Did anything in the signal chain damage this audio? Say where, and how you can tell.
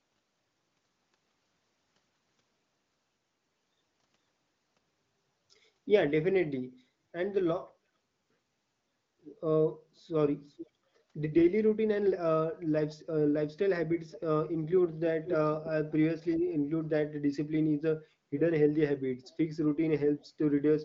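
Yes, likely an echo leak in call processing: copies of the speech return about 0.48 to 0.49 s late at 10.47–10.7 s, 14.13–14.18 s and 15.24–15.36 s, the last fairly loud.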